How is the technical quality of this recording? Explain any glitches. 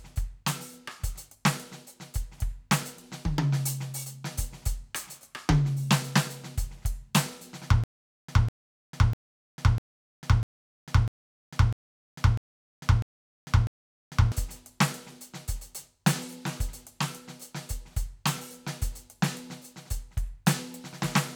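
The music has one glitch, a stutter with silent gaps from 7.84 to 14.32 s. A stalled player or stream likely kept retrying, replaying the same 200 ms fragment ten times, each followed by about 448 ms of digital silence, repeating every 648 ms. The music that should have filled that stretch is lost.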